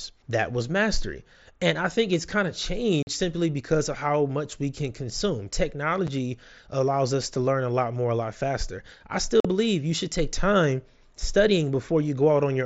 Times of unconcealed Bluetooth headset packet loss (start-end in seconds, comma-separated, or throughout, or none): 3.03-3.07, 6.07, 9.40-9.45